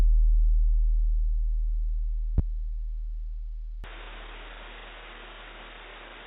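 At 2.38 to 2.41 s a single loud pop sits on top of the sound, rising roughly 15 dB above it while the audio continues underneath. This is likely a brief voltage pulse from a plug, switch, static or driver glitch, shaped by the downstream circuitry.

From 3.84 s onward the input switched to a poorer device. With no gap at the changeover, the band suddenly stops at 3.8 kHz, so the sound turns dull and boxy at much the same level. A new noise floor around 35 dB below the signal comes in. A mid-recording change of microphone or headset profile is the likely cause.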